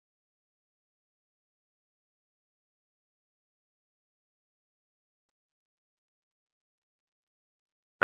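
From 4.40 s to 6.13 s the speech suddenly runs about 5.3% fast and rises nearly a semitone (about 89 cents), then snaps back to normal. This is a drift correction step, likely clock-matching software jumping the playback rate to rebalance its buffer.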